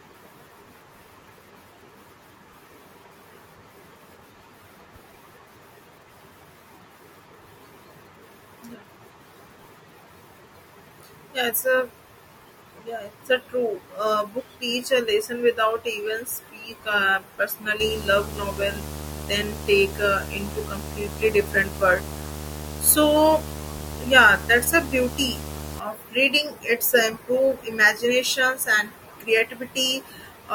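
From 17.80 s to 25.80 s the speech carries video or display buzz: a screen or video cable is coupling its refresh signal into the audio path, so a steady 75 Hz buzz with a gritty hash above it sits under the voice, fairly loud, roughly 10 dB below the speech. On a spectrogram this shows as a horizontal line at 75 Hz with a ladder of harmonics and a haze of broadband noise; the waveform gains a constant ripple between syllables.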